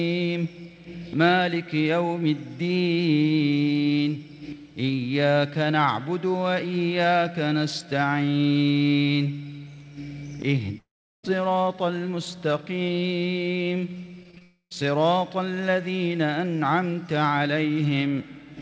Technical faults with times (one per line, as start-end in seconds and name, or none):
10.78-11.25 long network dropout
14.23-14.42 repeated packet loss (robotic sound)
14.42-14.84 long network dropout